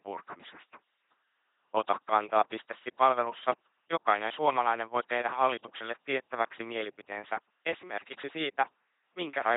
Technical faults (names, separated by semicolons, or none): LPC-10 vocoder